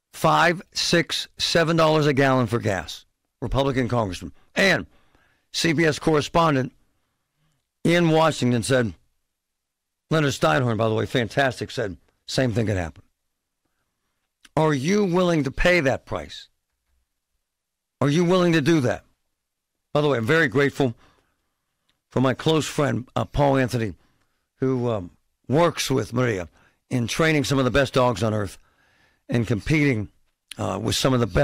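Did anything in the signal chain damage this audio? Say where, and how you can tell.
Yes: hard clipping throughout, about 11 dB overdrive at a converter or fixed-point stage. Flat-topped waveform peaks spray high harmonics up the spectrogram, heard as crackle.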